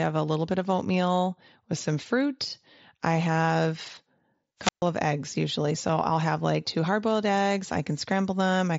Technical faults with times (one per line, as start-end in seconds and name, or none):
4.59-4.86 wireless microphone squelch dropout